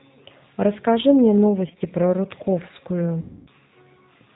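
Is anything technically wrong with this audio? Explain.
Yes. The speech carries two faults.

Throughout, the G.729 codec is plainly audible. This low-rate VoIP coder rebuilds each 10 ms frame from a vocal-tract filter, a pitch predictor and a handful of pulses. Nothing above 4 kHz survives, and the sound is consistent with an 8 kbit/s G.729A stream. The voice comes across as rough and slightly synthetic. On a spectrogram the energy stops at a hard ceiling near 4 kHz, and harmonics look smeared and grainy.

VoIP packet loss, concealed by the speech codec, occurs twice. From 1.68 to 1.81 s, brief gaps of no more than 20 ms each, about 60 ms in total, are scattered across roughly 120 ms. From 3.21 to 3.51 s, about 260 ms of frames are lost. In both, the decoder fills the missing frames by repeating its last pitch and filter at falling gain. The later loss is stretched into a sound that fades out. 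On a spectrogram it shows as a frozen, fading patch, and the waveform shows a decaying envelope. The voice stays weak briefly as the decoder recovers.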